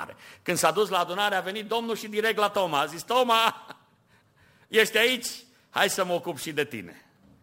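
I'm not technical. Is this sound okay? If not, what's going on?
No. Sample clock jitter runs through the whole recording, from start to finish. The device that turned the sound into digital form had an unsteady internal clock, so each tiny snapshot of the speech was taken slightly early or late, wobbling by roughly ten millionths of a second. Those timing slips turn into a hiss or roughness riding on the speech, strongest on loud and sharp, bright sounds and disappearing in the pauses.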